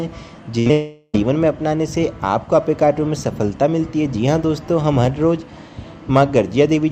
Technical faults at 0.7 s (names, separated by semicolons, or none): burst of packet loss; short concealed packet loss; long network dropout